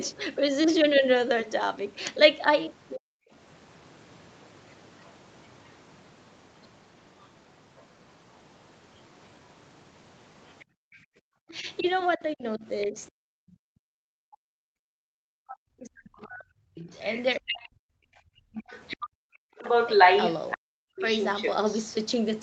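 Speech suppressed in double talk at 2.96 to 3.34 s: the talker's voice sinks by roughly 40 dB for a fraction of a second. This likely happens because both sides spoke at once and the echo canceller, unable to separate the near voice from the loudspeaker echo, turned everything down.

Other side's voice leaking through at 10.49 to 11.02 s: a faint second voice, about 30 dB below the talker, likely slips past an echo canceller that did not fully remove the loudspeaker playback from the microphone.

Background gated by the echo canceller at 10.65 to 11.22 s: while the loudspeaker plays, the canceller clamps the microphone down by about 40 dB. The room tone drops out for about half a second and then returns.

Speech suppressed in double talk again from 11.5 to 21.02 s: the talker's voice repeatedly dips or cuts out, by as much as roughly 40 dB, for about five seconds in total. This likely comes from the canceller ducking the near voice while the far side talks.

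Other side's voice leaking through at 17.03 to 17.23 s, about 15 dB below the talker, and again from 18.58 to 21.78 s. In that second stretch the leaked voice is roughly as loud as the talker, or slightly louder, likely because echo cancellation fails while both sides are active.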